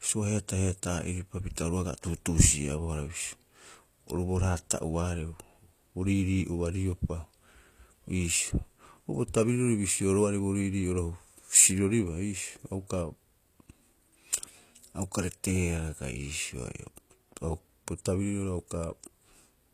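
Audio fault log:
Throughout, HE-AAC compression: the speech has plainly audible codec damage, with a gritty, metallic treble and nothing above 14.9 kHz. The likely cause is spectral band replication rebuilding the upper bands from lower ones, which fits a low bitrate around 24 kbps.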